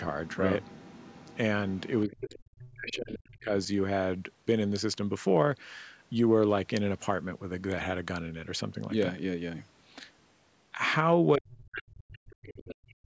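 From 0.25 to 1.37 s and again from 1.68 to 2.39 s, the other side's voice is leaking through: a faint second voice, roughly 25 dB below the main speech, sits underneath the talker. This likely comes from a loudspeaker echo that the echo canceller failed to fully remove from the microphone signal.

Speech is suppressed in double talk from 2.05 to 3.51 s, overlapping the end of that leak. The talker's level drops sharply, at the deepest by around 35 dB, so parts of the speech fade or drop out. In the middle of this stretch, from 2.89 to 2.94 s, a brief scrap of the other side breaks through at about 20 dB below the speech. The cause is likely the canceller failing to separate the near-end voice from the echo while both sides spoke, and attenuating everything.

The same suppression returns from 11.36 s to the end of the clip, this time dipping by around 40 dB. Another burst of leaked far-end voice, again about 20 dB down, comes through from 12.68 to 12.90 s. 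The microphone path's band limit, with nothing above 8 kHz, is normal call processing rather than a fault.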